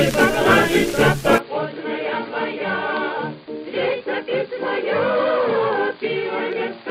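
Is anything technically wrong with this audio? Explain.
Yes. An input switched to a poorer device at 1.38 s; the recording likely moved to a narrower-band microphone, cutting everything above 4.8 kHz, dropping about ten decibels, adding fresh background noise.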